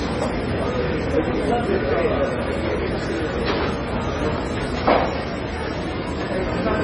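MP3 compression damage runs throughout: the treble stops sharply at about 10.3 kHz, and weak frequency components flicker in and out between frames, giving a watery, swirly texture with smeared attacks. The heavy damage fits an MP3 encode at a very low bitrate, likely around 24 kbps.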